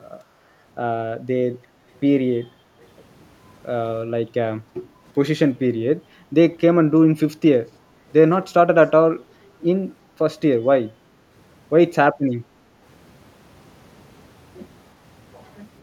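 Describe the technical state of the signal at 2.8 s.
At 2.8 s the speech carries a brief echo leak, from 2.82 to 2.87 s: a very faint, delayed copy of the speech arriving about 345 ms late, heard as a ghostly scrap under the main signal. The likely cause is a loudspeaker on one side whose echo canceller let some of its microphone pickup return. On a spectrogram it appears as a weak, smeared repeat of earlier harmonic patterns; the waveform barely changes.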